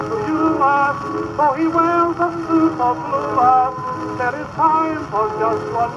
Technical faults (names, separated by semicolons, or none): none